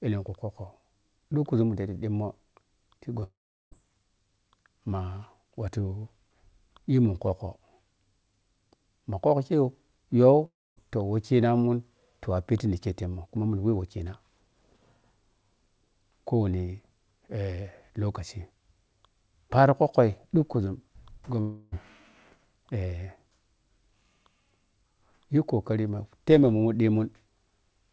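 Right around 3.20 to 3.24 s there's a short concealed packet loss. A sliver of the speech didn't reach the decoder in time, and the receiver papered over it by stretching the last bit of sound and easing back into the real signal. You hear it as a quick smear or wobble rather than a gap, and whatever was in that instant is gone.

It runs straight into the first of three long network dropouts. From 3.24 to 3.73 s the audio turns into a fading buzzy or hissy continuation of the last sound and then goes quiet for roughly 0.38 s. The second, 10.45 to 10.78 s, does the same thing, with about 0.26 s of silence at the end. The third, 21.40 to 21.74 s, is different: the synthetic tail fills the whole hole and never quite reaches silence. In every case the speech picks up again further on, with that stretch simply missing. The likely cause is packets not arriving at all. All of this sits on a call path whose sound stops at 8 kHz, which fits a G.722 link.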